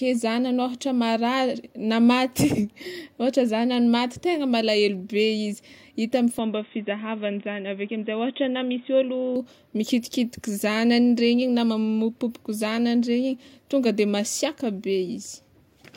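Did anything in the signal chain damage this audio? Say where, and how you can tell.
Yes. At the capture stage, the recording shows an input switched to a poorer device, most likely a change of microphone or a move to a headset's call profile. Just after "hita amy", from 6.39 to 9.36 s, the speech turns dull and boxy with nothing above 3.8 kHz, and a faint new noise floor appears well below the speech. Loudness stays roughly the same and there's no gap at the switch, so the giveaway is the sudden loss of top end and change of tone, which clears again at 9.36 s.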